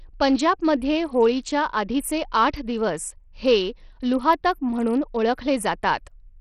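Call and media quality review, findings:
Speech, full duration: treble missing above 14.6 kHz, upper range flickering, gritty noise and aliasing. Likely Bluetooth SBC compression; heavy damage fits a small bit pool near 64 kbps, starving top sub-bands and coarsely quantising the rest.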